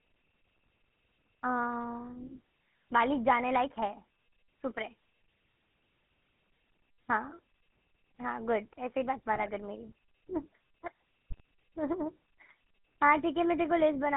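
The whole clip passes through the GSM full-rate codec, which rebuilds speech from a vocal-tract model driven by coarse, regularly spaced pulses, consistent with a 13 kbps stream. The result is a plainly audible buzzy, gravelly roughness, with the band confined to roughly 200 Hz to 3.4 kHz.

GSM bit errors then strike twice, from 9.35 to 9.54 s and again from 11.30 to 11.40 s. Corrupted bits reaching the decoder scramble the filter, pitch and gain values for a run of frames. The speech breaks into squawks, pops and gargling, and the later, shorter burst carries the higher error rate, about 1.6% against 0.95%.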